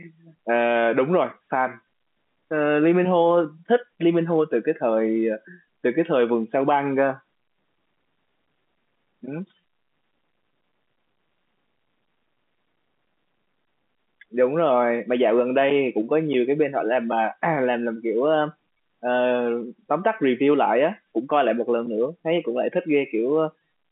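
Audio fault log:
No faults logged; the speech carries the narrow band of G.711 telephone coding, about 150 Hz to 3.5 kHz with nothing above 3.8 kHz.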